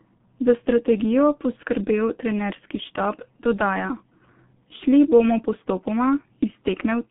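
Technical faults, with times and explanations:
Throughout, G.723.1 codec. The speech sounds muffled and hoarse, with smeared consonants. Nothing survives above 3.7 kHz, and lows thin out below 150 Hz. The slow, coarse voice model points to a bitrate near 6 kbit/s. The damage is heavy.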